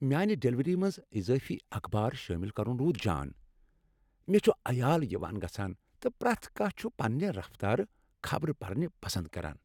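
No technical faults can be heard anywhere in the recording.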